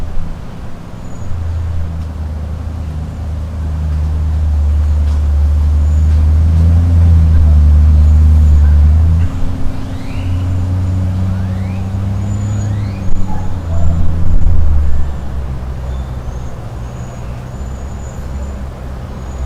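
Hard clipping hits twice: briefly from 13.10 to 13.22 s, then from 13.85 to 14.92 s. The signal runs about 6 and 7 dB past what the stage can pass, so peaks get sheared flat, and those square tops throw off high harmonics you hear as a harsh, crackly fuzz.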